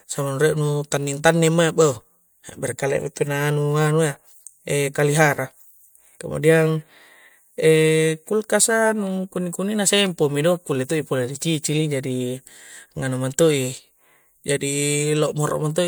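A recording of speech, the signal carries no audible technical faults at any point.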